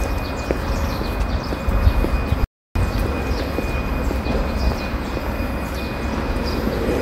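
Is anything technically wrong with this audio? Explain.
Yes. From 2.44 s to 2.76 s there is an audio dropout to silence lasting about 0.31 s. The sound stops abruptly mid-flow and the gap is silent, with no background or room tone underneath, then the audio resumes just as suddenly. This points to the input signal being interrupted while the recorder kept writing samples, likely from a momentary loss of the input device or link, and whatever occurred in that stretch is missing.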